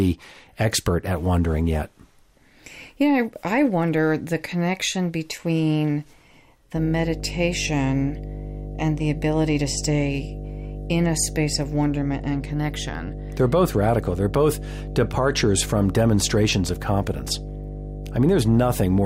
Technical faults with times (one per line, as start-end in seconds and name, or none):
6.76-19.06 mains hum